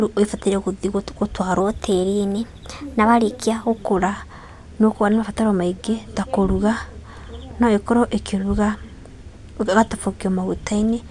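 From 1.60 to 3.82 s, a wrong sample rate makes the speech run 1.09 times fast and about 1.5 semitones sharp, which fits 22 kHz audio played at 24 kHz unconverted. A spectrogram shows harmonics and formants shifted upward, syllables squeezed shorter.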